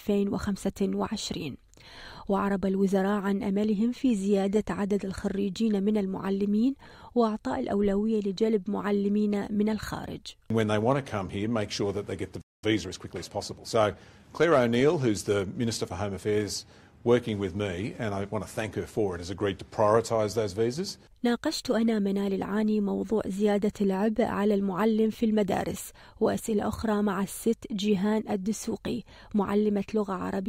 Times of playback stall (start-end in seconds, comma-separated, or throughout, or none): 12.41-12.63